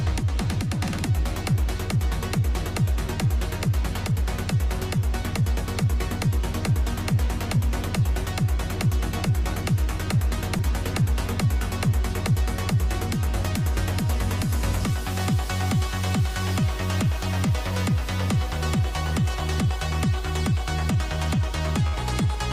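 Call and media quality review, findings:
Short concealed packet loss at 10.57 to 10.61 s: brief smear in the audio. Jitter buffer/decoder path. About 20 ms never arrived in time, and the receiver bridged it by extending the preceding sound for roughly 17 ms before blending back.

Burst of packet loss at 21.87 to 21.95 s: held, fading tail, then audio resumes with 60 ms gone. Network/receiver concealment. Consecutive packets lost or late; the decoder stretched the last sound across the 60 ms gap and attenuated it.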